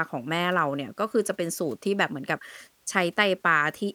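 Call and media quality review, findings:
Nothing stood out on listening to this speech recording.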